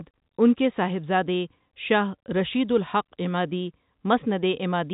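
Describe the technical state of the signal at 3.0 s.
At 3.0 s the signal is intact, with the speech carried cleanly through G.711 telephone coding, its band stopping at about 3.8 kHz.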